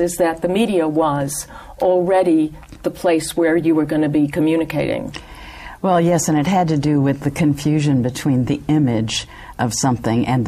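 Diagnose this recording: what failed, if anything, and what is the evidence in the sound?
Nothing failed; no fault is audible anywhere here.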